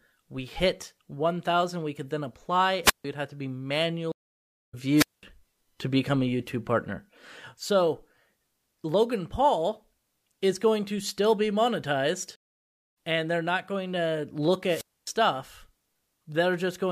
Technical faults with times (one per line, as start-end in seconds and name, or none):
2.83-3.05 wireless microphone squelch dropout
4.12-4.75 stream reconnect
4.96-5.23 wireless microphone squelch dropout
12.36-12.96 stream reconnect
14.66-15.10 wireless microphone squelch dropout